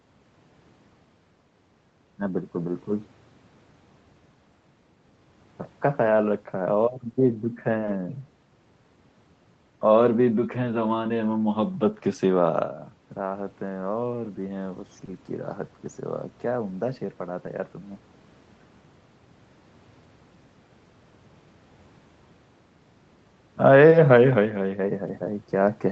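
At 6.79 to 6.85 s there is a lost packet rebuilt from error correction. About 40 ms of speech, consistent with two lost packets, was replaced by the low-bitrate redundant copy that Opus carries inside the following packet. Nothing drops out, but that stretch turns grainy and hissy. On a spectrogram it shows as a narrow band of smeared, noisier harmonics with no gap in the waveform.

At 7.85 to 7.89 s comes a short concealed packet loss. About 20 ms never reached the decoder, so the receiver extended the preceding sound to cover the hole and then crossfaded back into real audio. It is heard as a tiny smear or wobble. An error-correction rebuild then covers 7.87 to 7.89 s, adding a brief rough texture.

The same pairing returns at 15.05 to 15.09 s: about 20 ms of concealment followed by an error-correction rebuild from 15.07 to 15.09 s, with the same smear turning coarse.

A final lost packet rebuilt from error correction at 25.07 to 25.09 s gives about 20 ms of noisier, rougher sound. 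It appears as a thin grainy sliver on the spectrogram, below the 8 kHz ceiling set by the wideband Opus call path.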